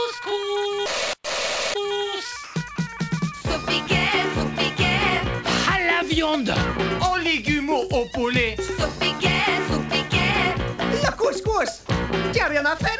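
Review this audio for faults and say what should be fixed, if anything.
At 2.44 to 2.56 s and again at 2.76 to 2.78 s, the sound gives way to steady noise before returning. This is likely sound dropped by the voice detector, which treated the signal as background and stopped sending, so the receiver filled the gaps with comfort noise. On a waveform, each gap looks like a flat, even band. A spectrogram shows uniform smooth noise that replaces the structured content, beneath the call path's cut-off with nothing above 8 kHz.

Lowering the voice detector's sensitivity threshold and adding a longer hangover time would keep quiet passages from being cut.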